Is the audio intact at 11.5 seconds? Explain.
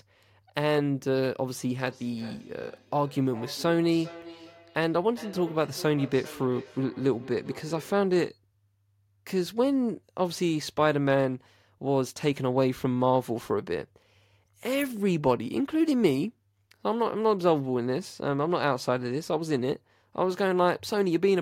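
Yes, the speech at 11.5 seconds is intact, with no audible fault at that moment.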